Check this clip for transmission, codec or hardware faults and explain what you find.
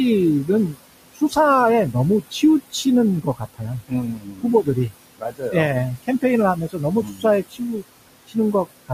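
Two faults stand out, both from a noise suppressor: its processing artifacts run through the whole recording, and at six points it cuts into the speech itself.

Noise suppressor artifacts are present from start to finish. The room noise, which sits about 15 dB below the speech, dips away in the gaps and creeps back up beneath each phrase. The suppressor estimates the steady background and turns down each frequency band it judges to be noise, frame by frame, by about 20 dB here. Because that decision shifts from moment to moment, the remaining noise pumps instead of staying even.

Speech cut by the noise suppressor occurs at 0.44 to 0.80 s, 1.14 to 1.37 s, 2.31 to 2.86 s, 3.23 to 5.54 s, 6.56 to 7.83 s and 8.27 to 8.54 s. Within each span, short stretches of the speech sound swallowed or faded. The longest span, 3.23 to 5.54 s, loses the most, somewhere near three-quarters of a second in total. 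The suppressor mistook these low-level speech parts for background and pulled them down with it, by about 16 to 22 dB at the deepest points.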